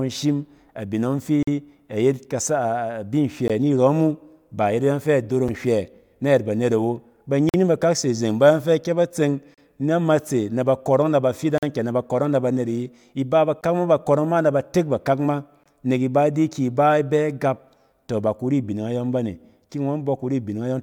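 Gaps between stream segments recur about every 2 seconds, at 1.43, 3.48, 5.48, 7.49, 9.54, 11.58, 13.61 and 15.64 s. Each is a hard-edged hole of silence, lasting from about 6 ms to 46 ms. The longest come at 1.43 s and at 7.49 s, between "nhywɛ nayɛt banet awo" and "bakak se zeng bayↄng". At each join, the timing left a small space before the next segment, and the player filled it with silence. Nothing is lost. The speech simply stops briefly.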